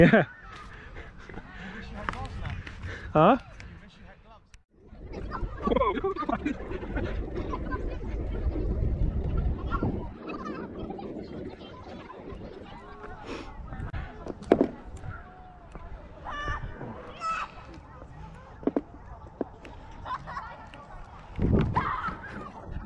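No technical faults are audible.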